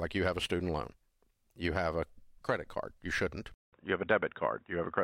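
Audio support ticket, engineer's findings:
Input switched to a poorer device at 3.54 s, likely a fallback mic or headset call profile. Roughly 190 ms dropout at the switch, then dull, boxy sound with nothing above 3.8 kHz, about 5 dB level shift, and new background noise around 45 dB down, to the end.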